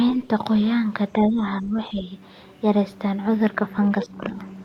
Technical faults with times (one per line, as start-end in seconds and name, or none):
0.16-0.30 speech suppressed in double talk
1.28-2.13 speech suppressed in double talk
4.04-4.23 speech suppressed in double talk